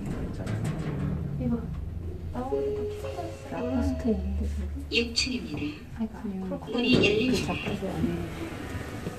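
No technical faults can be heard in this audio.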